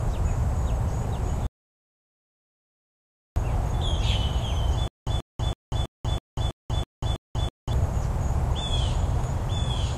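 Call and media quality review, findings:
Audio dropout to silence, 1.47–3.36 s: sound cuts to silence with no room tone for 1.9 s. Likely input link loss or mute while the encoder kept writing.

Stutter with silent gaps, 4.88–7.73 s: a 136 ms fragment repeats eight times, each followed by 190 ms of digital silence (326 ms cycle). Likely a playback or stream stall replaying its last buffer.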